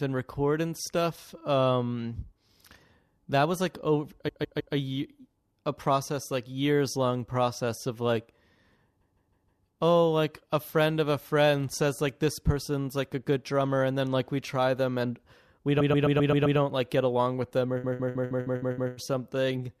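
Repeated frames stutter the speech at 4.27–4.74, 9.00–9.63, 15.79–16.58 and 17.83–18.93 s. A block of 157 ms (131 ms at 15.79 s), fitting a run of five or six compressed frames, is decoded three to seven extra times, lengthening the audio.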